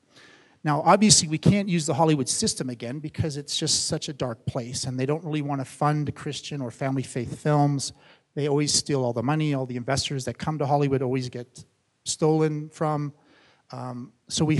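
Nothing stood out on listening; no fault could be heard at any point in the audio.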